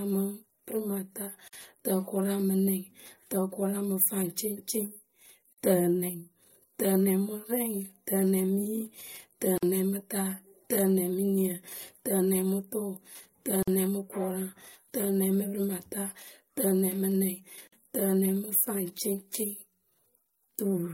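Brief dropouts of about 49 ms cut into the continuous speech at 1.48, 9.58, 13.63 and 17.68 s. Each gap has smeared edges, and the sound resumes exactly where it stopped. From 9.58 s on they recur every 4.0 s. These are gaps at a join of encoded pieces. Separately encoded segments were spliced without trimming, so each segment's encoder start-up delay and final-frame padding remain as silence at every seam.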